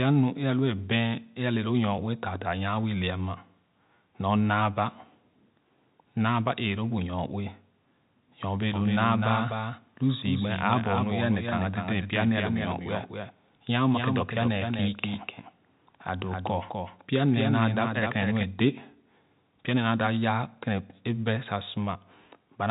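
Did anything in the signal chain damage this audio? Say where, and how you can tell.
Yes. From 8.74 to 18.44 s the speech carries a clean second copy, about 5 dB quieter and roughly 300 ms behind, with no room colour, starting and stopping abruptly. This doubled audio track likely comes from a slower second capture path being mixed in. The band stops near 3.8 kHz, as expected for the telephone coding.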